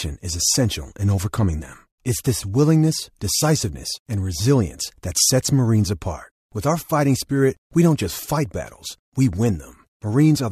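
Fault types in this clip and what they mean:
No technical faults detected.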